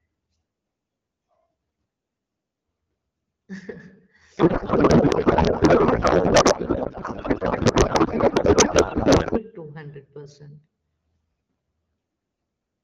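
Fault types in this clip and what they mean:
Codec payload misread: the receiving end unpacks the AMR wideband bitstream with the wrong framing, treating octet-aligned frames as bandwidth-efficient. Header and speech-parameter bits land in the wrong fields, so the decoder synthesises from meaningless values. From 4.37 s to 9.40 s the speech gives way to garbled noise and warble that barely tracks it. Outside that span the codec is clear, with light coding damage consistent with a 12.65 kbit/s mode.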